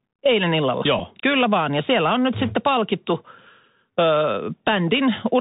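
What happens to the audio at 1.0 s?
At 0.99 s there's a Bluetooth headset packet repeated glitch. Two lost packets' worth of audio, about 7.5 ms, gets refilled by re-decoding the last packet, so you hear a tiny buzzy tick. Underneath, the Bluetooth CVSD headset codec keeps everything band-limited below 4 kHz, with scratchy s sounds and a grainy hiss.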